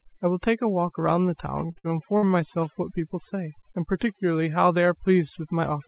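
This speech clip, which has nothing above 4 kHz as expected of a narrowband call path such as G.711, shows overdone noise removal throughout. A noise reduction stage set far too aggressively has pushed individual frequency bands down or out whenever they sat close to its noise estimate, taking the quieter parts of the speech with them. The background collapses to near silence dotted with twinkling specks. From 1.66 to 2.25 s, repeated packet loss (robotic sound) follows. Packets went missing again and again, and four gaps opened in quick succession, the longest about 57 ms. Each gap was patched by stretching the last received sound, so nearly a third of that stretch is concealment rather than real audio. The speech turns choppy, with pieces missing.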